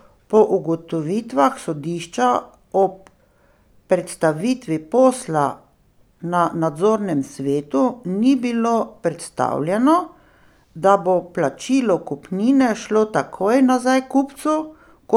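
From 0.37 s to 15.05 s the speech carries a click recurring every 1.22 s, roughly fifteen in all, each landing wherever the signal happens to be. The steady spacing points to clock drift buffer slips, likely caused by two devices running on independent clocks about 150 ppm apart. The buffer between them creeps toward its limit until a block of around seven samples is dropped or repeated, leaving a brief discontinuity in the waveform.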